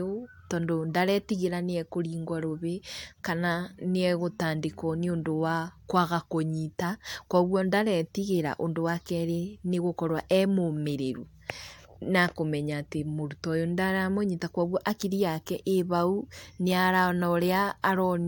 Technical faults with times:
none

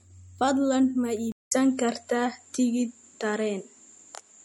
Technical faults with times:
0.00-4.45 MP3 compression
1.32-4.45 input switched to a poorer device

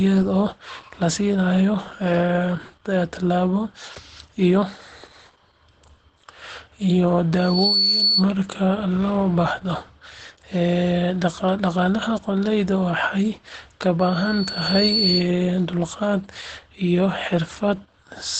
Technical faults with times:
0.00-18.39 Opus voice compression
7.38-8.25 loudspeaker feedback squeal

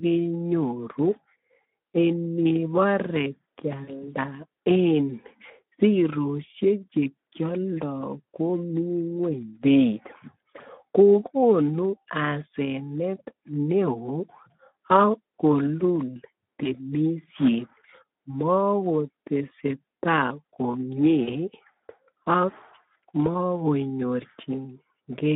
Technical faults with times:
0.00-25.35 Speex codec
3.84-4.05 VoIP packet loss concealed by the speech codec
16.63-16.94 VoIP packet loss concealed by the speech codec
21.23-21.35 VoIP packet loss concealed by the speech codec

